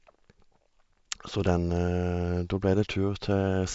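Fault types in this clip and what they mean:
No audible faults detected.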